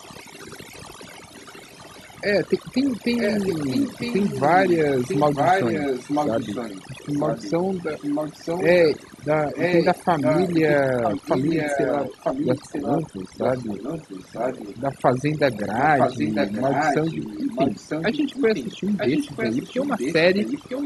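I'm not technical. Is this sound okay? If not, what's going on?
No. Overdone noise removal runs through the whole recording. A cleanup tool meant to strip out background noise was set far too strong. Wherever parts of the sound came close to what it judged to be noise, it switched them off, including the quieter parts of the speech. The background drops and breaks up into little twinkling specks.

Echo leak appears from 0 to 2.6 seconds, faintly, then much more strongly from 3.2 to 8.9 seconds, 9.2 to 14.8 seconds, and 15.5 seconds to the end. A second copy of the speech trails the original by almost a full second, about 0.95 s. This is likely a call where one person used a loudspeaker, and their echo canceller failed to remove everything their microphone picked up, so that leftover sound was sent back down the line.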